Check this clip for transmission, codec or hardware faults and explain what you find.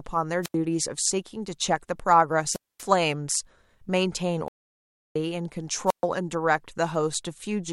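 Three wireless microphone squelch dropouts interrupt the speech, at 0.43–0.55 s, 2.46–2.87 s and 5.87–6.04 s. As the radio link from an analogue FM transmitter weakens, the receiver's noise rises until its squelch circuit closes and mutes the output. Each event is a short swell of hiss or static followed by a hole of near silence: about 86 ms in the first, 237 ms in the second and 129 ms in the third, before the signal recovers and the speech returns.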